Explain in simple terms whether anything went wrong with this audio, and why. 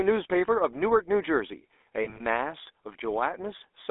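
Yes, two things went wrong, both typical of an old mobile phone call.

Throughout the clip, the speech has the buzzy, gravelly roughness of the GSM full-rate codec, the original digital mobile phone coder. It rebuilds the voice from a simple model of the throat and mouth driven by evenly spaced pulses, so it comes out coarse. The sound is also squeezed between about 300 Hz and 3.6 kHz, giving it a thin phone-line tone. That steady grit, present everywhere, tells it apart from plain muffling, which would only dull the sound without roughening it.

From about 2.04 to 2.21 s, there are lost GSM frames. Over roughly 160 ms, short pieces of the signal never arrived, the longest gap around 40 ms. In each gap the decoder kept repeating the last good sound, so you hear a brief metallic, ringing smear instead of silence or a click. That held-over ringing is what distinguishes it from an ordinary dropout, which would simply go quiet.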